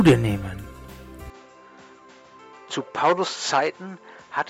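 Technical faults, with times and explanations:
1.3 s to end: input switched to a poorer device, likely; sound turns duller with nothing above 7.6 kHz, level drops about 5 dB, a faint new noise floor appears, and there is no gap at the change.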